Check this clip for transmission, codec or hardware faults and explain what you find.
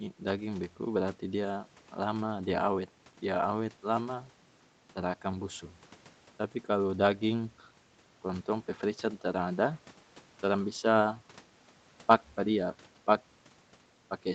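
Nothing stood out on listening to this speech, beyond the expected band limit of a call path that carries nothing above 8 kHz.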